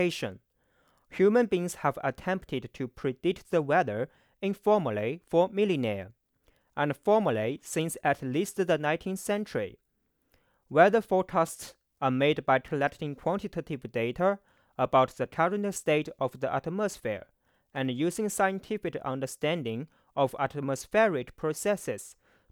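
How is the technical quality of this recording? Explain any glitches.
The technical quality of the recording is good, with no glitches to explain.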